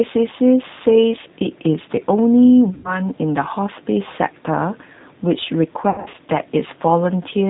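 Throughout, the speech carries plainly audible G.729 codec damage. Rebuilt at 8 kbit/s from a vocal tract filter and sparse pulses, it sounds rough and slightly synthetic. A spectrogram shows nothing above 4 kHz and grainy, smeared harmonics.

From 2.74 to 3.01 s, VoIP packet loss concealed by the speech codec bridges about 100 ms of missing audio. The decoder extrapolates from its last pitch and filter at falling gain, giving a fading stretched sound, which the waveform shows as a decaying stretch. From 5.90 to 6.17 s, 180 ms drops out in patches across 240 ms, the longest lasting 80 ms, and the result is a weakened, fading stretch of sound.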